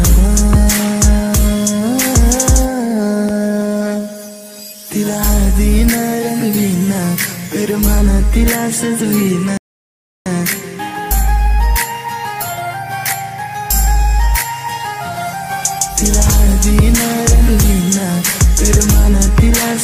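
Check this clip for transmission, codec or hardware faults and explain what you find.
One fault is present: a rebuffering stall from 9.57 s to 10.26 s. The playback side ran out of downloaded audio and halted until more data arrived, so about 0.69 s of silence is inserted. When sound returns it picks up exactly where it broke off, with no content skipped or repeated. The effect is a clean hole that lengthens the clip without removing anything from it.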